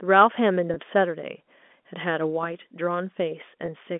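At 0.74–0.76 s and again at 3.66–3.68 s, a speech packet was lost, each gap fitting one 20 ms frame. This is packet loss with pitch repetition: the receiver looped the last pitch period to bridge the hole, so the speech briefly sounds held and slightly buzzy.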